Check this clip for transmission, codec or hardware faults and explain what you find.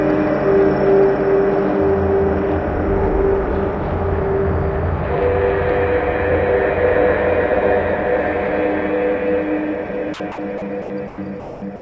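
Seven short dropouts near the end of the clip point to sound dropped by the voice detector. The audio came through a G.722 call path, heard as nothing above 8 kHz and fitting a 64 kbit/s stream. That path carries the audio and is not a fault.

Between 10.14 and the end, the sound breaks up into brief stretches of steady noise. These fall at 10.14–10.20, 10.32–10.38, 10.58–10.62, 10.82–10.90, 11.08–11.18, 11.40–11.62 and 11.76 to the end, lasting 40 to 220 ms each. The likely cause is the sender's voice detector judging the sound to be background and pausing transmission, with the receiver filling each gap with comfort noise until sending resumed.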